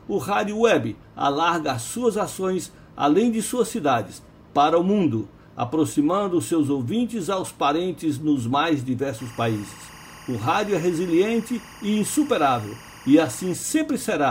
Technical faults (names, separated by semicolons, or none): timecode bleed